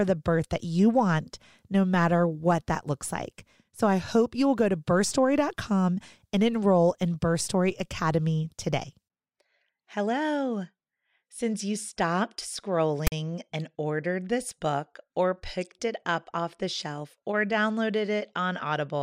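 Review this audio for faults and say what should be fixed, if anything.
File tags played as audio at 13.07 to 13.12 s, just before "and ordered this book". Text tag bytes were decoded as samples, giving a harsh, lopsided rasp, then dead silence where the padding zeros ran. A click or dropout lacks this hard-edged static burst followed by silence. Prevent it by having the decoder skip tag blocks by their declared size instead of reading them as sample data.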